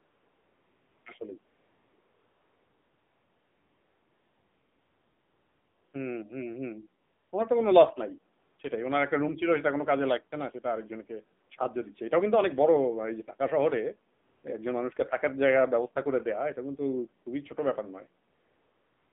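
Throughout, the speech sounds buzzy and synthetic, held to a narrow band from 200 Hz to 3.6 kHz. That is the AMR narrowband mobile codec: its vocal-tract model and sparse pulses, at a bit budget that fits the 7.4 kbps AMR-NB mode, leave plainly audible coding damage.

A smooth, steady hiss replaces the real background from 0 to 1.06 s, 1.46 to 5.94 s, 7.04 to 7.32 s, 8.42 to 8.58 s, 11.46 to 11.50 s, 14.18 to 14.44 s and 18.30 s to the end, switching in and out. This is AMR comfort noise, synthesised by the receiver while no speech frames arrived.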